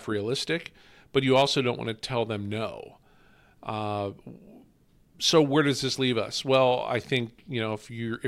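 A brief crackle breaks up the speech peaks from 1.35 to 1.42 s and again, more faintly, from 6.54 to 6.57 s. This is hard clipping. The level ran about 3 dB and then about 1 dB past what the stage could pass, flattening the peak tops and adding high harmonics.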